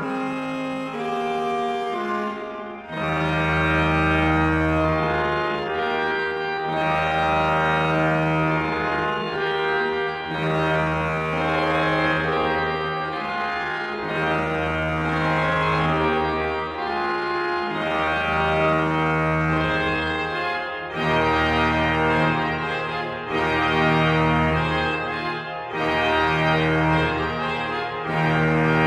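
A time-stretched section runs from 0.0 to 20.2 s, played at about 0.67 times normal pace with pitch unchanged. It likely comes from software lengthening the audio by repeating short slices, which leaves it dragging until the pace snaps back at 20.2 s.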